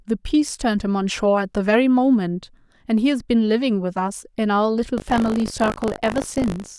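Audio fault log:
4.96 s to end, buffer tearing: a robotic 50 Hz rattle on the speech, as a small slice of each 20 ms buffer replays audio about 40 ms old.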